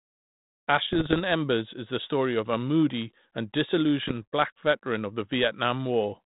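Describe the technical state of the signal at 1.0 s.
Bit errors on an ADPCM link from 0.88 to 1.21 s: flipped bits derail the decoder's step size and predictor, producing pops and rough bursts, seen as broadband vertical streaks and jagged waveform spikes.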